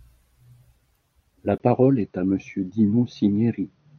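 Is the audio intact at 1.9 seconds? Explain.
No. From 1.58 s to the end, the speech sounds duller and boxier, with nothing above 6.3 kHz, a 20 ms gap at the change, and faint new background noise at an unchanged level. The input likely switched to a poorer device with a narrower band.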